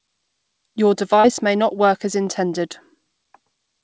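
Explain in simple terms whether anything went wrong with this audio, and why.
Short concealed packet loss at about 1.20 to 1.26 seconds, just before "may not work as". About 40 milliseconds of the call never reached the listener's end in time. The receiving software filled the gap by stretching out the last bit of sound it had, then blended back into the real audio. You hear a brief smear or wobble there, over a call line that carries nothing above 8 kHz, which fits the G.722 call codec.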